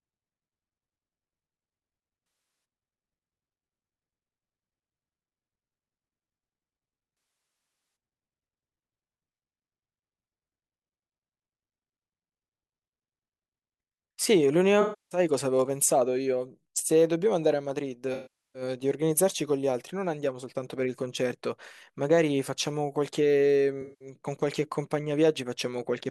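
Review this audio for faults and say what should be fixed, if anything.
AAC frame loss with concealment occurs at 2.24–2.64, 7.15–7.96, 14.81–15.19, 18.14–18.62 and 23.81–24.08 s. For 0.19–0.81 s the decoder rebuilds missing frames from the last good spectrum, so the speech turns smeared and noisy. On a spectrogram, harmonics blur into static, flat bands. On the waveform, the syllable envelope goes flat. Preventing it needs error-resilient AAC or retransmission on the transport.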